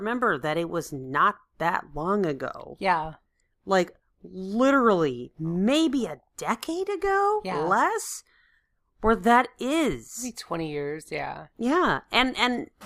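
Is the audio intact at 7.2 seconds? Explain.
Yes, the speech at 7.2 seconds plays through intact, with no fault at that moment.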